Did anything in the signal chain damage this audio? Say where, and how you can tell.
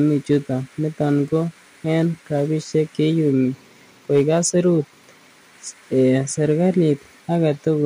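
Yes, there's hard clipping, most likely at the converter, where the level ran past full scale. You hear two short bursts of crackle on the peaks, one from 0.32 to 0.36 s and a longer one from 4.15 to 4.36 s. The overload is mild, about 2 dB and then about 3 dB, so the waveform tops get sliced flat. That adds the high, gritty harmonics that give it the brittle edge.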